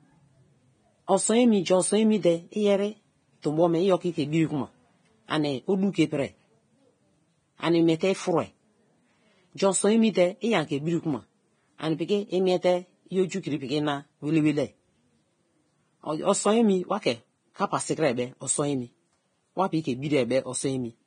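Throughout, the speech is hissy and grainy with nothing above 9.7 kHz, likely heavy Vorbis compression at something like 23 kbps turning the treble detail into noise.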